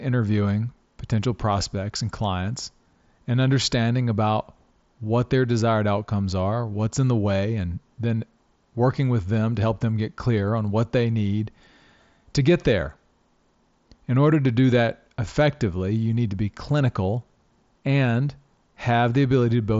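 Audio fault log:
No faults to log for this speech clip, which comes through a Bluetooth mSBC headset link with nothing above 7.7 kHz.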